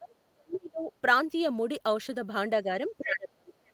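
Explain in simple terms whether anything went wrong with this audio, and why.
There's speech suppressed in double talk: the voice dips or drops out at 0 to 0.15, 0.31 to 0.9, 2.63 to 2.69 and 2.98 to 3.53 seconds, likely because the echo canceller turned it down while both sides talked. At 3.66 to 3.72 seconds there's the other side's voice leaking through, a faint scrap that likely got past the echo canceller.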